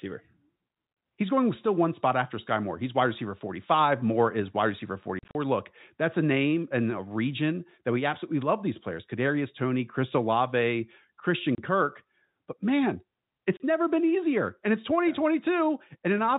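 Packet loss filled with silence strikes at 5.19 to 5.35 s after "is wide receiver", where dropouts of up to 40 ms scatter across 160 ms, then at 11.55 to 11.58 s and 13.57 to 13.60 s before "never been easier", each a 30 ms gap. Lost packets were replaced by silence, and the hole lengths point to 10 ms packets. The holes have hard edges against the band-limited telephone sound.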